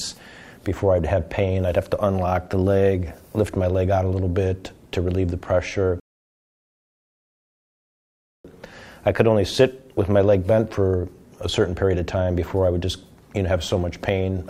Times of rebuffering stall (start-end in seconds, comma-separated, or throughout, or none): 6.00-8.44